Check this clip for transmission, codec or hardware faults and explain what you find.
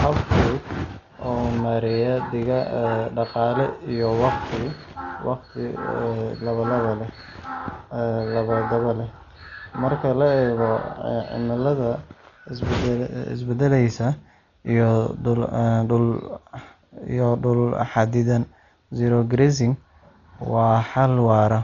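The speech carries heavy codec damage from start to finish, most likely Dolby Digital compression. Nothing reaches above 6.9 kHz, so the whole clip sounds dull, and a rough, fluttering noise clings around the tonal parts of the voice. The damage fits a very low bitrate of about 40 kbps, where the encoder narrows the band and leaves many frequency lines without mantissa bits, and the decoder fills them with dither noise. A plain low-pass filter would sound dull but clean, without that noisy flutter.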